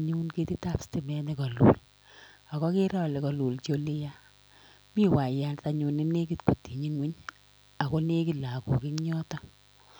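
A mains buzz runs under the speech from start to finish. It sits well below the speech, roughly 35 dB down. It comes from the 50 Hz power supply. Sharp switching spikes leak into the signal twice per cycle, 100 times a second. Those spikes carry a dense stack of harmonics reaching several kHz. The result is a steady, raspy buzz rather than a smooth hum. It never changes between words.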